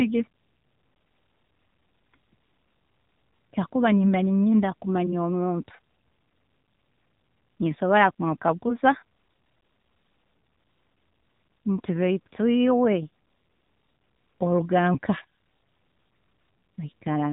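From start to finish the speech runs through the AMR narrowband mobile codec. Everything above about 3.8 kHz is gone, and the vocal-tract model leaves the voice plainly buzzy and synthetic, which fits one of the lower modes, around 7.4 kbps.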